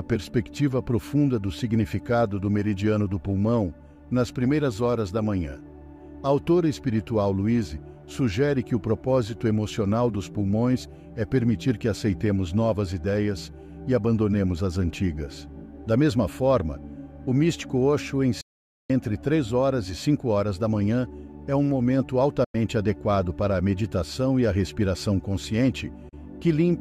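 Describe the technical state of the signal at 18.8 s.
At 18.8 s the signal is inside a digital broadcast dropout running from 18.41 to 18.90 s. The receiver muted after losing valid frames, with an 8 ms fade into silence. The waveform shows a flat-line gap and the spectrogram a blank vertical band about half a second wide.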